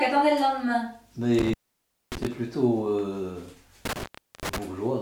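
The sound cuts out with crackle at the edges between 1.39 and 2.27 s (open about 0.59 s), and again between 3.85 and 4.58 s (about 0.40 s), leaving faint hiss: intermittent contact, a loose cable or plug briefly breaking the connection.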